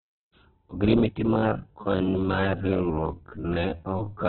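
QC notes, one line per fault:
throughout, Opus compression: likely a very low-bitrate Opus encode, which fits about 8 kbps; only narrowband audio remains, leaving the speech narrow, rough and grainy.
1.29–4.28 s, time-stretched section: software likely slowed this stretch to about 0.52x while holding pitch, so the speech drags.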